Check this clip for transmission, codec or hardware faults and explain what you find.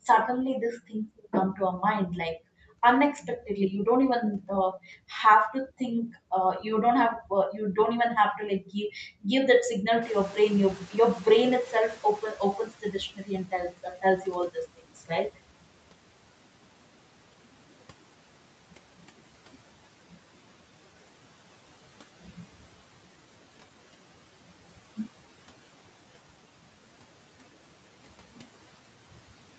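One fault stands out: the noise suppressor catching up after a sudden rise in background noise.

Noise suppressor catching up, 10.01 to 13.39 s: the room noise jumps by about 19 dB around 10 s, and the suppressor's noise estimate trails it. For roughly 3.4 s the new noise passes with little reduction, then sinks by about 11 dB as the estimate settles. It is heard as a rise in background noise, about 24 dB below the speech, that fades under the speech. The audio's top end stops at 8 kHz, consistent with a wideband call path.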